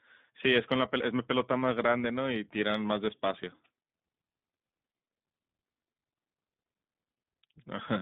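From start to finish the speech sounds thin, slightly rough and synthetic, with nothing above about 3.7 kHz or below 150 Hz. This is the iLBC codec: each 20 ms frame is coded independently at a low rate that fits its 15.2 kbps mode.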